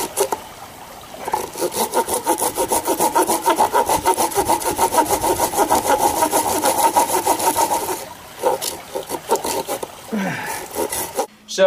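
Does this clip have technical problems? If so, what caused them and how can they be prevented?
Yes. From 4.71 s to 7.97 s there is a doubled audio track: a second full-band copy of the same sound trails the original by roughly 0.7 s, about 5 dB quieter. It carries no decay or room colour, and it appears and vanishes abruptly at those two points. The likely cause is the signal being captured twice, once through a slower monitoring or routing path, or an edit leaving two offset copies on the timeline. To prevent it, route each source to the recording only once and check edits for overlapping duplicate regions.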